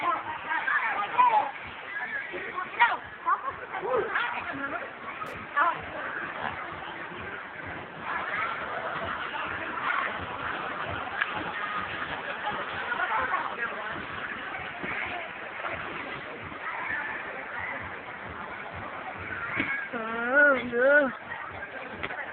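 At 5.26 s, running to 5.34 s, a short burst of loose connector crackle breaks into the sound. A worn or dirty contact is making and breaking as it shifts, chopping the signal on and off several times within about 80 ms. What separates it from a single digital click or a dropout is its irregular, scratchy cluster of rapid interruptions rather than one clean discontinuity or silent gap.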